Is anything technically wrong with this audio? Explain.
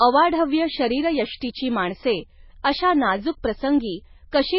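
Yes. Heavy MP3 compression runs throughout the speech, likely from encoding at a very low bitrate around 16 kbps. Starved of bits, the encoder removes everything above about 5.5 kHz and drops weak frequency lines that flicker between frames, leaving dull, watery, swirling speech with smeared attacks.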